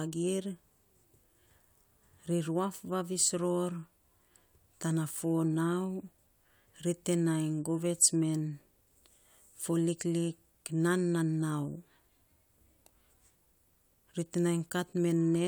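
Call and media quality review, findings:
No audible technical fault found; the speech signal shows no defect at any point.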